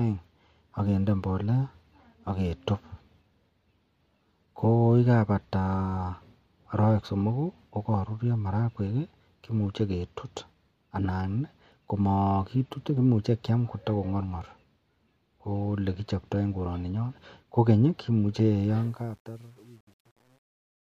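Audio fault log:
18.70–20.98 s, truncation distortion on a fade. As the speech fades out, the gain stage rounds each sample to coarse steps without dither. From 19.04 s to the end, the quiet tail turns gritty. The stepping fits roughly 9-bit resolution.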